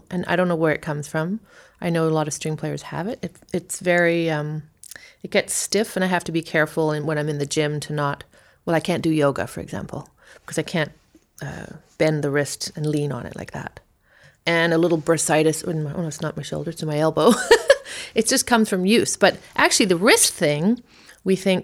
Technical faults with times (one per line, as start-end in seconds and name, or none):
none